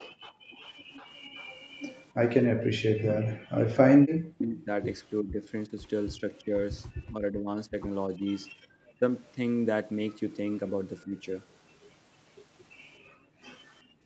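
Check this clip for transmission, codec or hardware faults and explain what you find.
The speech passes through an Opus call path with content stopping near 8 kHz. Three echo-canceller faults are audible.

Background gated by the echo canceller, 0 to 0.6 s and 13.02 to 14.05 s: the canceller clamped the microphone during loudspeaker playback, so room sound drops about 35 dB, then about 16 dB.

Echo leak, 0.61 to 2.64 s and 9.26 to 9.32 s: this is likely loudspeaker sound the canceller failed to remove. It is heard as a faint copy arriving 369 ms late, around 25 dB and then 40 dB below the speech.

Speech suppressed in double talk, 2.78 to 6.53 s, 7.09 to 8.25 s, 8.94 to 9.03 s and 11.05 to 11.2 s: the canceller likely treated overlapping talk as echo and ducked the talker. Dips reach around 40 dB in the first stretch, about 25 dB at 8.94 s, and around 10 dB elsewhere.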